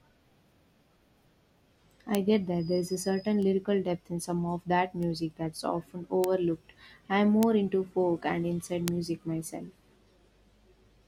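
Bit error spikes at 2.15, 3.43, 5.03, 6.24, 7.43 and 8.88 s: a flipped bit makes one sample (two at 8.88 s) jump and snap back, giving a lone broadband tick, about -5 dBFS (about -23 dBFS at 3.43 and 5.03 s). Unlike a dropout, no audio goes missing around it.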